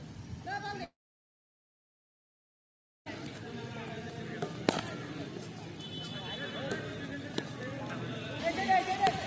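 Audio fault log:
0.84–3.08 s, long network dropout: the sound cuts out for about 2.2 s. There's a very brief buzzy tail as the receiver tries to stretch the last bit of audio, but it dies away almost at once and leaves near silence for roughly 2.1 s. Then the sound picks up further along, with that stretch simply gone. The likely cause is packets not arriving for that whole span. Through the G.722 call path, nothing sits above 8 kHz.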